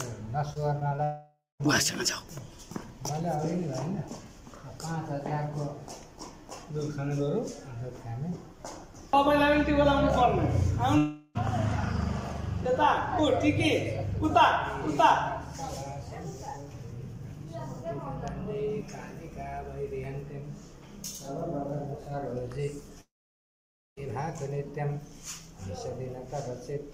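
Right near the start, from 0.53 to 1.00 s, there's a stretch of repeated packet loss (robotic sound). Small chunks of audio go missing, four gaps of up to about 20 ms each, and each hole gets papered over by stretching whatever came just before it. Since the holes come in quick succession, that patching turns the sound choppy, with roughly a seventh of that half-second being filler rather than real audio.

It runs straight into the first long network dropout, 1.04 to 1.62 s. About 0.56 s of audio just isn't there. The last sound gets smeared on as a fading buzz, then there's roughly a fifth of a second of silence before things resume, with that section skipped rather than delayed. That pattern is most likely a network outage. The second one, 10.98 to 11.37 s, loses about 0.38 s, but here the concealment fills nearly the whole hole, so it comes across as a brief smeared, held-over sound with almost no silence. 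The third, 23.01 to 23.99 s, is the worst: close to a full second is missing, and after a very quick fade it's basically dead silence for about 0.9 s before the audio picks up again further along.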